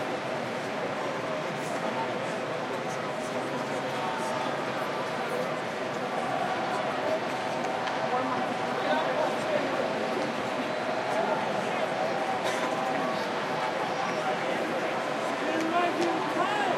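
No technical faults can be heard in the audio, and the signal stays steady and intact throughout.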